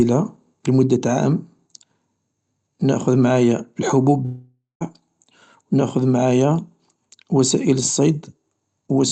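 From 4.25 s to 4.83 s the speech breaks off. The last sound is drawn out into a buzzing tail that fades, and about 0.17 s of near-silence follows before speech resumes with roughly 0.56 s of material gone. The likely cause is a long network dropout: packets stopped arriving, the receiver synthesised a decaying continuation, then muted until the stream returned. The fill has the same top-end limit near 8 kHz as the surrounding call-codec audio.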